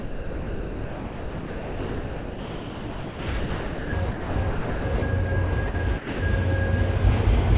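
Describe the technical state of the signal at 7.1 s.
At 7.1 s the audio is intact, with the sound carried through the call path's narrowband telephone coding, so nothing is heard above about 4 kHz.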